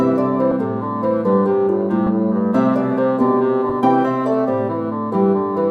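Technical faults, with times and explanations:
0.51 s, 2.06 s and 3.69–3.72 s, compressed frames skipped: the sound jumps ahead by about 20, 10 and 20 ms, which fits 10 ms frames left out because they were missing or refused as damaged.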